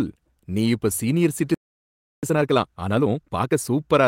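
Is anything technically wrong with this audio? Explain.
Yes, the speech has three faults.

A lost packet rebuilt from error correction occurs at 0.51 to 0.53 s, just before "நீ இப்ப சீனியர்". One 20 ms packet went missing, and the decoder played the low-bitrate copy carried in the next packet. There is no gap, only a brief rougher, noisier patch.

A playback stall runs from 1.54 to 2.23 s, after "நீ இப்ப சீனியர்". The sound cuts out mid-flow for about 0.69 s of silence, then resumes. The likely cause is the player running dry of data or its output thread being blocked.

Time-compressed catch-up follows from 2.23 to 3.59 s. To clear the backlog built up during the stall, the player cuts out small pieces and cross-fades the remainder, running at 1.5 times normal speed. The speech sounds hurried at unchanged pitch.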